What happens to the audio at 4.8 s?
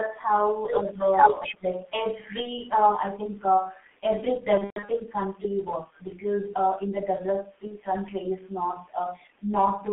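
VoIP packet loss concealed by the speech codec runs from 4.58 to 4.91 s, so 4.8 s falls inside it. Around 210 ms of audio goes missing in gaps spread over about 300 ms, the longest lasting 120 ms. The decoder fills each gap by extending its last pitch and filter at falling gain, so the speech smears into a fading buzz or coloured noise. Because each frame builds on the previous one, the voice stays weak and distorted briefly after audio resumes.

The G.723.1 codec shapes the whole clip, including this moment. The sound is confined to roughly 200 Hz to 3.5 kHz, and its coarse coding, consistent with a codec running at around 6 kbit/s, leaves the speech muffled and hoarse with blurred consonants. With its 30 ms frames, the 120 ms run is four lost frames in a row, so the decoder mutes from the third of them instead of carrying the smeared sound through.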